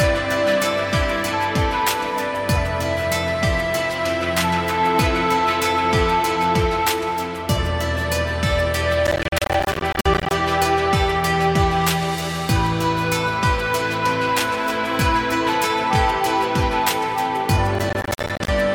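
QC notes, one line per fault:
9.07–10.31 s and 17.75–18.48 s, processor overload crackle: audio buffers of around 10 ms miss their deadlines dozens of times over a short stretch. Each miss leaves a hard-edged silent gap, and the gaps merge into gritty tearing that stops once the load passes, unlike a single isolated dropout.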